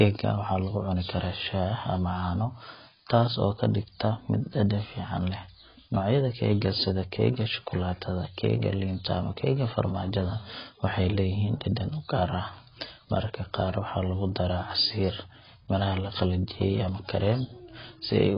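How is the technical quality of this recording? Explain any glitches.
The quality's pretty rough: the speech sounds dull and smeary from start to finish, which is the signature of AAC compression at a very low bitrate. Nothing comes through above about 5.2 kHz, consonants fizz and warble, and vowels sound watery. That's likely AAC-LC starved of bits, something around 16 kbps. The encoder drops the top band outright and leaves gaps in the rest of the spectrum, so each frame gets rebuilt coarsely.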